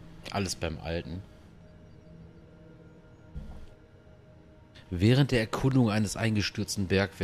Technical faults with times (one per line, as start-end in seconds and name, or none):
5.71-5.73 loud pop